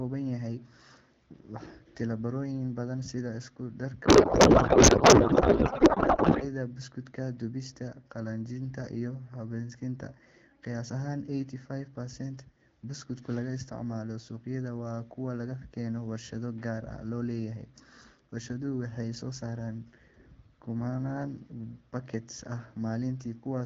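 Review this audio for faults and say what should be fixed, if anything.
From 4.05 to 6.47 s there is a codec payload misread. The speech becomes garbled noise and warble that barely follows it. The decoder places the AMR bit fields wrongly, which fits octet-aligned frames parsed as bandwidth-efficient. Both ends should negotiate and use the same AMR packing mode.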